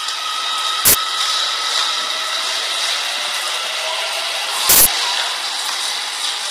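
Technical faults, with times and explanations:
Throughout, low-delay AAC compression: the sound is rough and grainy, with noise between harmonics and a thin top band, likely AAC-ELD's short frames at about 24 kbps.
0.85 to 0.94 s and 4.69 to 4.86 s, uninitialised buffer: loud bursts of digital noise lasting 85 ms and 171 ms, as unwritten memory was played, fitting 4096- and 8192-sample blocks.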